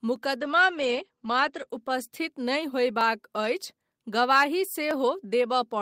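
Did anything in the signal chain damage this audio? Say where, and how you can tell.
Yes. A regular click recurs every 0.95 s, from 0.16 s through to the end of the speech. That steady rhythm most likely comes from clock drift buffer slips at the driver or buffer stage. Two clocks differing by several hundred ppm let the buffer creep until a few dozen samples are dropped or repeated.

Between 0.39 s and 2.47 s the speech turns rough and muffled, losing its top end. This is a call bitrate drop in call processing and the codec. The encoder fell from 32 to 12 kbps, narrowing bandwidth from 20 kHz to 8 kHz, and sat at the lowest rate for about 1.02 s.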